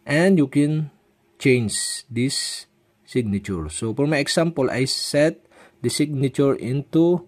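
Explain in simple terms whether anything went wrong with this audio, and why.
Yes, two bursts of DAB burbling, from 4.88 to 5.26 s and from 6.79 to 6.91 s. Weak reception let bit errors slip past error correction, so corrupted data put short blips of noise into individual frequency bands over the sound.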